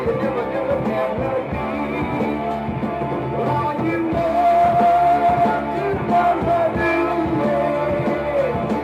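No dropouts, glitches, distortion or other technical faults are audible anywhere in the clip.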